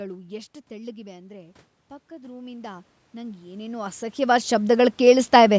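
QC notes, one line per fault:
0.68–5.28 s, automatic gain rising: after the talker draws back around half a second, the level reaching the microphone falls about 10 dB, and the gain control slowly lifts about 19 dB. Voice and room noise swell together, so the waveform envelope and spectrogram noise floor climb steadily.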